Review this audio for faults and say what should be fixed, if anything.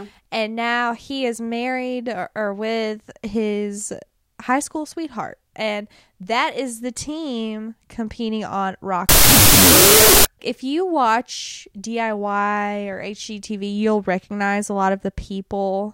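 From 9.09 to 10.25 s the speech turns into loud noise with the original buried beneath it, playing at half speed and lower pitch. This is a wrong sample width fault, which points to 32-bit float data being read as 16-bit integers, so many samples are assembled from mismatched bytes. To prevent it, carry the sample format explicitly with the data and check it wherever the stream is read or converted.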